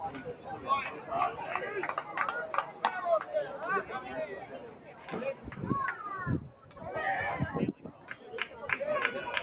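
The audio pumps and thins throughout, with held material and decaying tails sinking while sharp onsets still punch through, a level swing of roughly 10 dB. This is a speech-tuned noise suppressor left running on non-speech sound. It mistakes sustained tones and ambience for background noise and pulls them down. The deepest dips come where steady or fading sound gets cut harder than its surroundings: at 0.17 to 0.67 s, 0.94 to 1.1 s, 4.33 to 5.1 s, 5.34 to 5.5 s, 6.48 to 6.8 s and 7.73 to 8.24 s, each dropping by about 6 to 7 dB. Underneath, the band stops at 4 kHz, which fits a G.711 mu-law call path.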